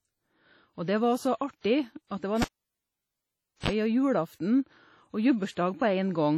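A speech recording with heavy ringing, washy smearing and hiss that rises and falls with the signal, and nothing above 17.4 kHz, all the way through. This is likely WMA compression at a low bitrate near 32 kbps. Long transform blocks spread quantisation noise over tens of milliseconds, which separates it from steady broadband hiss. Right after "det var", at 2.42 s, a cable is pulled and plugged in. A pop is followed by about 1.23 s of near silence and a 41 ms burst of 50 Hz mains buzz as the tip makes contact, then another pop at 3.70 s. The pops and the buzz distinguish it from a plain dropout.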